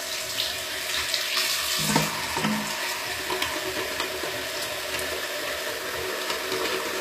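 The encoding was likely HE-AAC compression at a low bitrate, consistent with about 24 kbps. Only the lower spectrum is truly coded, and the treble is rebuilt by copying lower bands upward under a coarse envelope. Throughout the clip, the top end stays bright but misaligned with what lies beneath, so high detail sounds gritty and metallic, the damage is plainly audible, and nothing survives above 14.9 kHz.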